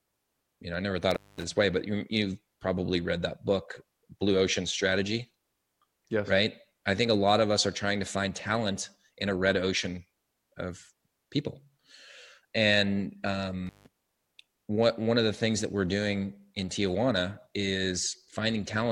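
The audio drops out twice from an intermittent contact. A loose cable or plug briefly breaks the signal path. The first break runs from 1.11 to 1.44 s, open for about 0.21 s. The second runs from 13.67 to 13.87 s, open for about 0.16 s. Each has crackle at its edges and faint hiss inside.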